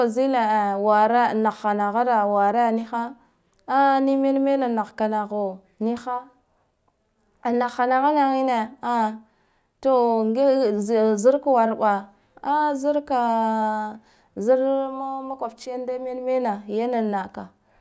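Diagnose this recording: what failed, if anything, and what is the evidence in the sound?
Nothing in the recording stood out on listening as a failure at any stage between capture and playback.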